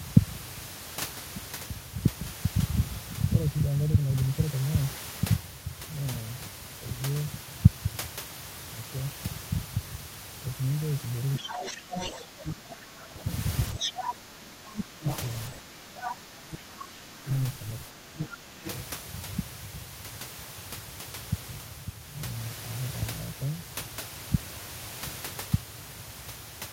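This is a speech clip, and from about 11.4 s the other side's voice is leaking through at 11.37 to 14.14 s, 14.73 to 15.18 s, 15.98 to 16.58 s and 18.19 to 18.74 s, sitting only about 5 dB under the talker. That's likely a loudspeaker echo the canceller didn't fully remove. Over the same stretch you get speech suppressed in double talk from 11.4 to 17.29 s and again from 17.86 to 18.65 s, with the talker dipping by up to roughly 15 dB in places, around four seconds of it in the first span. Most likely the canceller couldn't tell the talker from the echo while both were speaking, so it turned everything down.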